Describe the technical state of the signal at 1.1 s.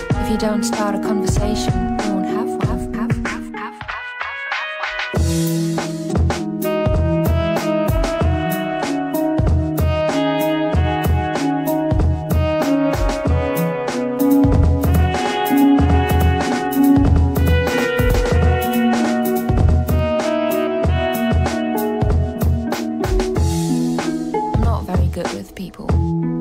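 At 1.1 s the signal is intact, with no dropout, clipping, glitch or other fault audible at that point.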